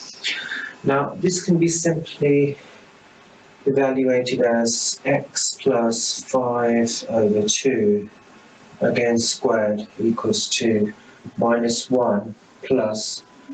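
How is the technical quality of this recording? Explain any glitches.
The main problem is gain pumping, running the whole way through. The gain swings by about 15 dB, so everything sounds squashed. The likely cause is input gain set far too high, with a fast limiter clamping down on each peak. The audio also stops around 8 kHz, as expected from the call's codec.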